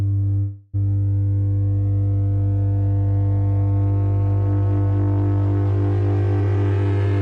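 From 0.39 to 0.76 s the music stalls into a fading buzzy continuation of the last sound, a call audio freeze, likely from delayed packets draining the jitter buffer. About 340 ms of filler is inserted, nothing is lost, and playback resumes that much later.

From 6.41 to 7.2 s a jitter buffer speed-up plays the music at roughly 115% speed with unchanged pitch. The receiver trims repeated pitch-period-length slices, about 150 ms in total, to shed excess buffered delay, so the tempo audibly rushes.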